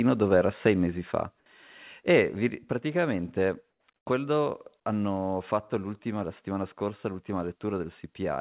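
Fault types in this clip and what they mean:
Microphone overload: Between 0.66 and 0.68 s, after "dove era" and before "mesi fa", the loudest peak is driven about 2 dB past full scale, most likely by too much microphone input gain. A few percent of samples there sit pinned at the converter's limit, adding a brief harsh crackle. On a waveform the peaks appear as flat-topped plateaus. A spectrogram shows a short vertical smear of added harmonics, which stops at the 4 kHz ceiling of the G.711 call path.
Microphone volume stepped down: Voice and background drop together in two sudden steps, about 2 dB at 1.02 s and about 4 dB at 2.49 s. The likely cause is the call software cutting the device's input gain after the overload. The level falls instantly rather than fading, and the room tone falls by the same amount. On a waveform the envelope shifts abruptly to a lower height. A spectrogram shows every band darkening at once, with a vertical seam at each step.
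Comfort noise in place of the background: During pauses from 3.70 to 3.88 s and from 3.96 to 4.06 s, the real background gives way to a steady, featureless hiss. The likely cause is discontinuous transmission, with the receiver generating synthetic noise, which fits RFC 3389 style comfort noise. The first patch is about 4 dB quieter than the real background, and the second about 20 dB quieter, almost silence. A spectrogram shows flat, uniform texture in these gaps with hard edges. On a waveform they appear as smooth, even blocks.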